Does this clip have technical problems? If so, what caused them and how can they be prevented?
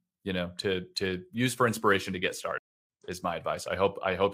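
Yes, a stream reconnect: after "for inspiration to get" the sound drops out from 2.58 to 2.86 s, then a fresh decoder picks up about a fifth of a second further along. A bigger client buffer and a steadier connection would prevent it.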